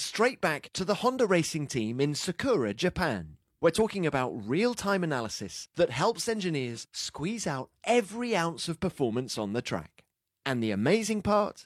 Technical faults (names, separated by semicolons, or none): none